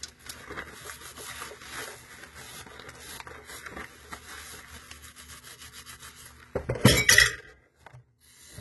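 Throughout, the treble sounds gritty and metallic and stops at 11.8 kHz, likely from heavy HE-AAC compression copying lower bands upward at about 16 kbps.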